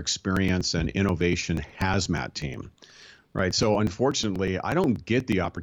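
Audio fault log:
0.12 to 5.57 s, periodic USB or driver dropouts: the speech is broken by a steady train of ticks spaced 0.121 s apart, around fifty in all. At each one roughly 4 ms of audio is skipped rather than filled, so the waveform jumps straight from one point to a later one and the discontinuity is heard as a click. The even spacing points to a background task stalling the USB bus or audio driver at a fixed interval, and the ticks are audible only where speech is present.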